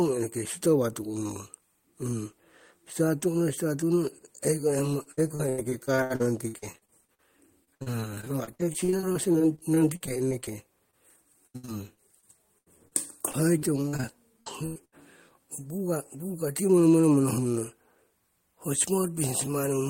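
From 5.03 to 7.20 s, 7.64 to 10.49 s and 11.47 to 14.05 s, repeated packet loss gives the speech a choppy sound with pieces missing. Gaps of up to 85 ms are patched by stretching the previous sound, which shows on a spectrogram as smeared, repeated harmonic blocks. A short concealed packet loss at 10.91 to 10.95 s leaves a brief smear. Bursts of packet loss at 14.41 to 14.48 s, 14.66 to 14.83 s and 14.85 to 14.94 s fill each gap with the last sound, fading into a held buzz or hiss. The waveform tapers through each of these gaps.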